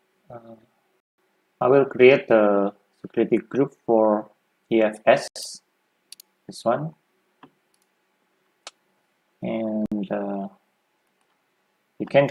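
Three brief gaps of clean silence, at 1.00 to 1.18 s (about 180 ms), 5.28 to 5.36 s (about 80 ms) and 9.86 to 9.92 s (about 60 ms), are likely Bluetooth stalls: the headphones' buffer ran empty while delayed packets were resent. Unlike a crackly dropout, each pause is silent.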